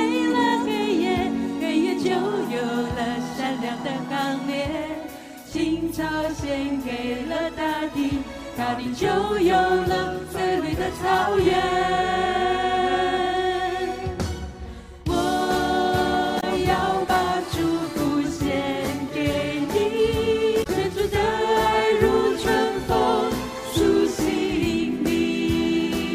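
At 16.37 to 16.44 s and again at 20.63 to 20.67 s, short bursts of damaged data in the compressed stream break through as brief chirps or squawks. In each spot the decoder received corrupted frames, misread them, and had to hunt for the next valid frame header before decoding cleanly again.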